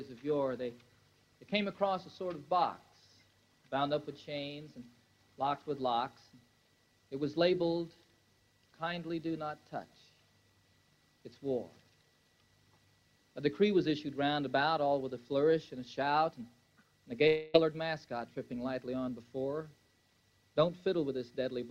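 From 17.27 to 17.56 s the audio stops advancing and the last sound is stretched into a buzzy, fading continuation for about 0.26 s, never reaching true silence. When sound returns, roughly a quarter second of material is simply gone. This is likely a long network dropout with the receiver concealing the gap. Unlike a brief packet loss, the smeared fill lasts long enough to hear fading, and unlike a plain mute, nothing goes silent.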